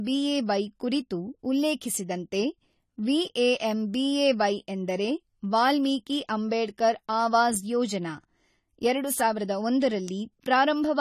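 Throughout the recording, the speech has likely passed through AAC compression at a low bitrate, consistent with AAC-LC running at around 32 kbps. With so few bits to spend, the encoder discards detail its hearing model judges least noticeable, and nothing remains above 14 kHz. The codec damage is plainly audible: the speech sounds dull and smeared, with a warbling, fizzy texture clinging to sustained sounds and sibilants from start to finish.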